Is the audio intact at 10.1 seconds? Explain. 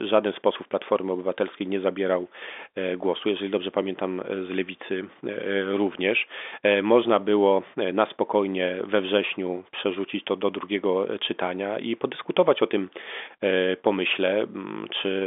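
Yes, the audio is intact at 10.1 s: nothing there breaks up, and it carries the narrow band of G.711 telephone coding, with nothing above about 3.7 kHz.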